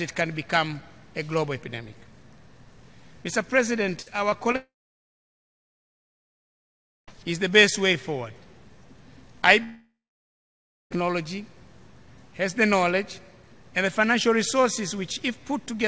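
Around 4.02 to 4.08 s, 4.30 to 4.34 s and 4.52 to 4.56 s, short concealed packet loss occurs: about 40 ms, then 20 ms, then 20 ms of audio failed to reach the decoder in time. Each hole was patched by extending the preceding sound and crossfading back into the real signal. The three patches land in quick succession and are heard as brief smears or wobbles, with whatever was in each hole lost.

From 4.56 to 7.09 s, the audio drops out for about 2.5 s, and the likely cause is a long network dropout that left the decoder without audio. A short continuation of the last sound fades quickly, leaving about 2.4 s of silence before the audio resumes partway along, with the missing stretch gone. From 9.63 to 10.92 s, a second long network dropout, likely from the same cause, removes about 1.3 s. It fades out and gives about 1 s of silence before the audio resumes. Throughout, nothing is heard above 8 kHz, which fits the G.722 call path at 64 kbps.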